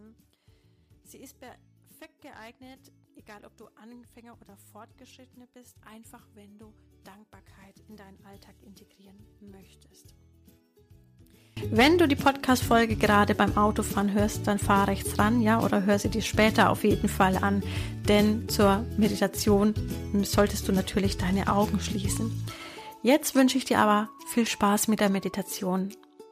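From the start to 11.57 s the mono sum drops by about 27 dB, leaving a faint residue, likely one channel inverted so shared content cancels. The waveform shrinks to a low sliver and the spectrogram dims overall until full level returns.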